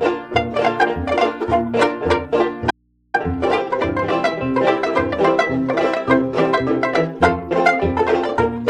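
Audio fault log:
2.71–3.14 s, audio dropout to a faint residue: the music cuts out abruptly for about 430 ms and then snaps back. The gap is not silent. It holds a low mains hum, roughly 45 dB below the music. The break is a hard edge, not a pause or a fade. The likely cause is a brief loss of the source feeding a live input. The open input then picks up hum until the signal returns.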